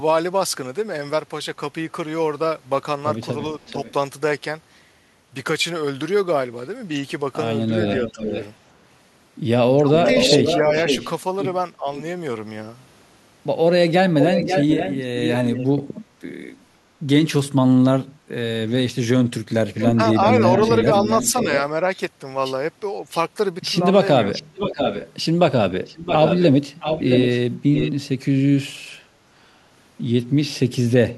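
A speech recording with echo leak at 3.61–3.93, 7.87–8.45, 10.0–12.0, 14.19–15.66 and 19.78–27.92 s. It arrives about 20 dB, then 10 dB, then 5 dB below the voice, at delays of 444, 535 and 668 ms. It likely comes from a loudspeaker echo canceller letting residue through, and shows as repeated harmonic traces offset in time. Speech suppressed in double talk appears at 7.7–11.86 s (dips up to roughly 10 dB, totalling about 0.7 s) and at 19.96–21.46 s (roughly 5 dB, about 0.2 s), likely the canceller attenuating both talkers at once. The waveform shows brief notches, and the spectrogram shows momentary gaps in energy.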